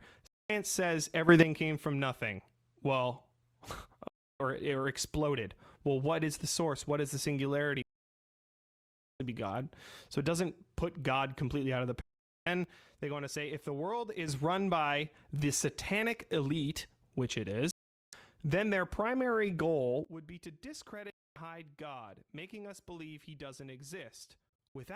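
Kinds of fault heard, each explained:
digital broadcast dropout: The receiver loses valid frames and mutes, with only a fade of about 3 ms, so the sound drops to silence and whatever was sent meanwhile is gone. It happens at 0.27–0.50, 4.08–4.40, 7.82–9.20 (the longest, about 1.4 s), 12.01–12.47 after "completely out of the", 17.71–18.13 between "satanic elite which it" and "then their primary goal", and 21.10–21.36 s, plus several brief holes scattered over 24.49–24.76 s. On a waveform these are flat silent gaps, and on a spectrogram they are clean vertical black bands across all frequencies.
sudden gain jump: The level changes from one sample to the next with no ramp, likely from a digital gain setting or bit shift applied abruptly, so the speech and its background noise shift together. At 1.29 s it rises by about 12 dB just before "came from nothing". From 12.64 to 14.28 s it drops by about 6 dB, and from 20.05 s to the end it drops by about 14 dB. 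The waveform envelope steps sharply, and the spectrogram brightness changes at a vertical edge.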